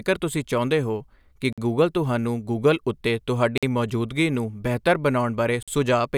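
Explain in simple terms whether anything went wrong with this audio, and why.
Gap between chunks, at 1.53 to 1.58 s, 3.58 to 3.63 s and 5.63 to 5.68 s. The speech stops dead for 50 ms each time, with abrupt edges, for example between "ਤੁਸੀਂ ਚਾਹੁੰਦੇ ਹੋ ਕਿ" and "ਗੂਗਲ ਤੁਹਾਨੂੰ ਗੂਗਲ ਉੱਤੇ". The holes come every 2 seconds, which shows the audio was handled in 2-second pieces with a bit of silence inserted at each join. No speech is missing, but the flow is chopped.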